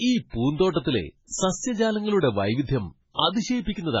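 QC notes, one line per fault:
throughout, MP3 compression: watery, swirly speech with nothing above 7.7 kHz, likely from heavy MP3 encoding at a starved bitrate, which fits about 16 kbps.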